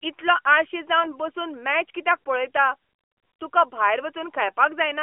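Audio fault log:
1.02–1.11 s, AMR bit errors: just after "इतलो आळशी" the sound turns briefly hoarse and gargly. A few percent of weakly protected codec bits arrived flipped, a span fitting about three 20 ms frames.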